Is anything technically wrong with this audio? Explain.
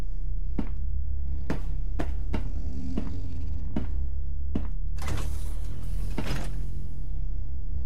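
Yes. A DC offset runs through the whole clip: the waveform is shifted off zero by about -21 dBFS. It isn't audible as a tone, but it eats headroom on one side and leaves steady energy at 0 Hz.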